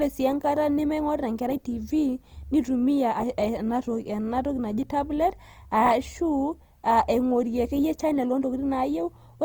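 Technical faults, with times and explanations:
Throughout: Opus compression. The speech sounds grainy and rough, with noisy texture filling the bands instead of MP3-style swirling or holes. Bandwidth stays full up to about 20.2 kHz, not muffled, which likely points to Opus in its music mode at roughly 24 kbps.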